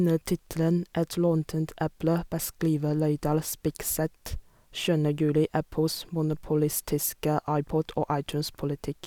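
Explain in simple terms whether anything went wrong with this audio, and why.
Something did go wrong here. At about 3.27 seconds there is a DC step. The center line of the recording suddenly jumps to a new resting level. You hear that jump as a short low thump. The offset then holds until about 6.33 seconds, when it snaps back and makes a second thump. The speech itself carries on through both moments without changing. This kind of shift can come from a converter recalibrating or an input with an offset being switched in.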